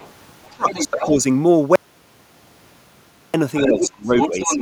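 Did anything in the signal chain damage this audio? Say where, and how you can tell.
Yes. The far end's voice bleeds in faintly at 0.0–0.1 s, clearly at 0.44–1.05 s, and nearly full level from 3.55 s on. That's other side's voice leaking through, likely residual echo the call processing didn't cancel.

Speech suppressed in double talk shows at 0.49–1.19 s and 3.65–4.52 s. The talker ducks by roughly 20–25 dB while both speak, likely the echo canceller clamping everything.

There's an audio dropout to silence from 1.76 to 3.34 s: 1.58 s of dead silence, no room tone. Likely the input device or link dropped while recording continued.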